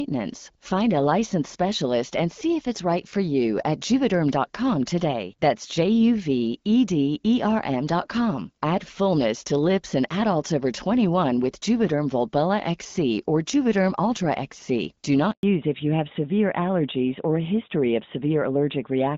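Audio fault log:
15.31 to 15.43 s, handover gap: the speech cuts out for 120 ms as the call hops between networks. No speech frames arrive while the switch happens, so the sound fades within a few tens of milliseconds and just sits silent until the new link picks up.
15.43 to 19.17 s, fallback to narrowband: right after the gap the call drops from HD Voice to the older narrowband codec, so nothing above 4 kHz survives. It sounds duller and rougher from there to the end, as the new link likely negotiated AMR-NB at 12.2 kbit/s.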